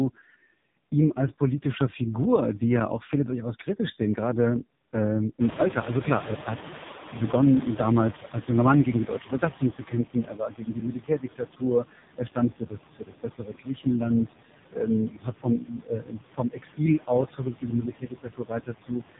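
Right from the start the speech has the sound of an AMR narrowband mobile codec, and a harsh one. Nothing gets through above about 3.8 kHz, so it's dull and boxy, and the voice has that buzzy, synthetic edge you get when the vocal-tract model is fed very few bits. The heaviness of the damage fits the lowest AMR-NB mode, around 4.75 kbps. Any background left in the signal turns swirly and warbly rather than staying a clean hiss.

On top of that, noise suppressor artifacts run through the whole clip. The suppressor pulls down whatever bands it judges to be steady noise by about 17 dB, frame by frame. The background dips away in the gaps and comes back up under the speech.

At around five and a half seconds the room noise jumps by about 19 dB. From 5.4 to 10.04 s you can hear the noise suppressor catching up. Its noise estimate lags, so the louder background comes through with less reduction at first. 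Over those 4.64 s it gradually sinks as the estimate adapts, ending up about 14 dB down. What remains sits about 12 dB under the speech.

From 14.26 to 19.03 s there's speech cut by the noise suppressor. It mistakes parts of the speech for noise and turns them down with the background, by as much as about 18 dB at the worst point. Adding it up, about three seconds in that stretch are affected. Soft consonants and word endings sound swallowed, and quieter bits go faint.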